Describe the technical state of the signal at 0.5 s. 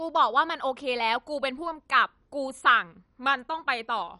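At 0.5 s the speech carries MP2 compression damage, present throughout. Nothing remains above 11.3 kHz. Starved upper sub-bands drop out and the remaining ones are coarsely quantised. The result is dull and gurgling, which likely points to a low rate near 48 kbps.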